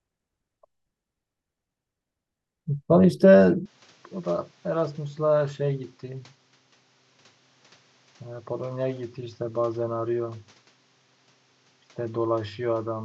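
Input switched to a poorer device at 3.66 s in this speech clip: from there to the end, nothing sounds above 7.6 kHz, level drops roughly 10 dB, and new background noise appears, likely from a different microphone.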